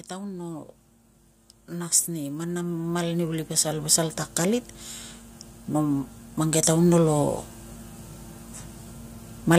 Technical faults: automatic gain rising

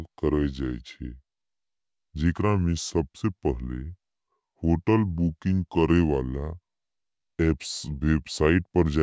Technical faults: wrong sample rate

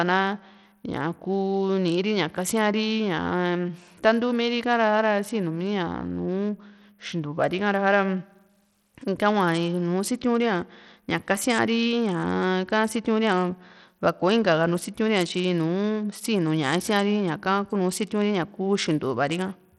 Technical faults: Bluetooth SBC compression

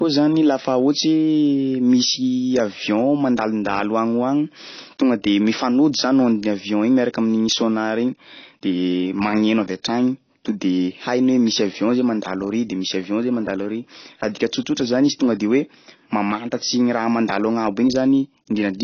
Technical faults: AAC compression

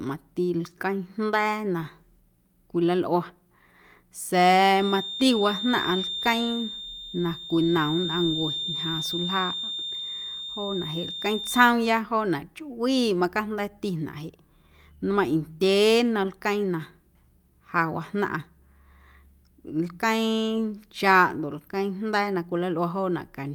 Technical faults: feedback whistle

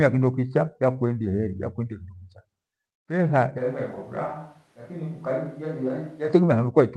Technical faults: switch to a distant microphone

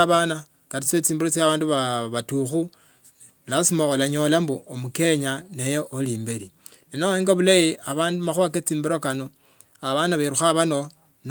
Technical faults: none

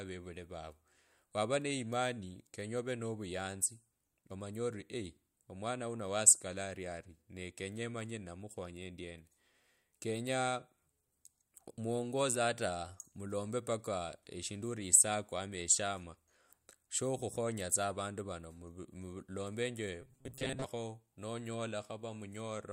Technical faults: robotic sound from repeated short buffers

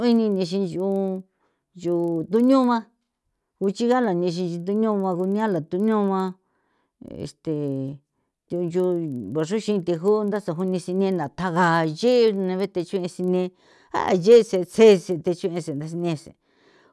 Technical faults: resampler restarted on every block

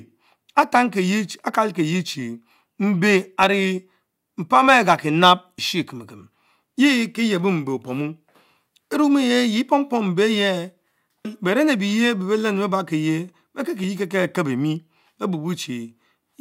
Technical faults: damaged data in a compressed stream

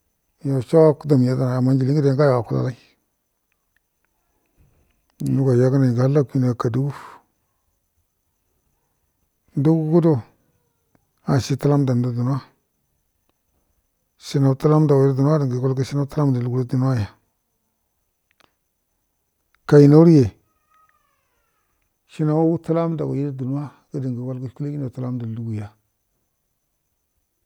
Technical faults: none

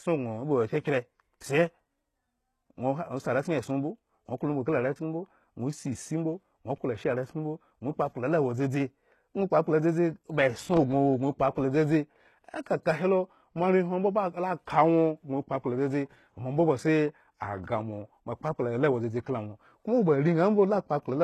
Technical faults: HE-AAC compression

